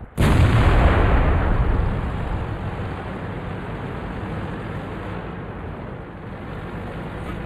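Hollow throughout, with a notch around 5 kHz: channel delay (comb filtering), one channel trailing the other by roughly 0.1 ms before the mono sum.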